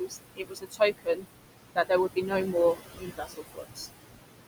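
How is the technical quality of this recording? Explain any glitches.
The technical quality suffers from heavy-handed noise suppression, with processing artefacts throughout and speech swallowed in three places.

Noise suppressor artifacts run through the whole clip. The suppressor pulls steady background noise down by about 20 dB, frame by frame. The noise sinks between the words and rises under them.

Speech cut by the noise suppressor occurs at 0.0–0.2 s, 0.36–1.25 s and 2.96–3.89 s. The suppressor mistakes quiet speech for noise. Drops reach about 19, 21 and 18 dB, so softer sounds fade out for most of each span.

The room noise sits about 8 dB below the speech.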